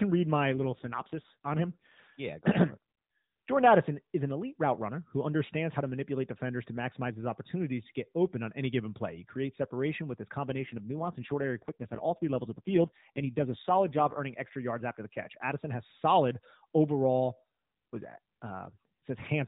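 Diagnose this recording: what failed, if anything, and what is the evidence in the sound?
The failure is in the codec stage: an AMR rate drop, twice. Just after "read my", from 0.54 to 2.02 s, the speech goes rougher and more synthetic, and again after "creates separation with his", from 10.50 to 14.21 s, recovering before "extra yards after the". The band stays narrowband and nothing drops out. The texture degrades, which fits a link-driven step down from about 12.2 to 5.9 kbps, with bits traded for error protection.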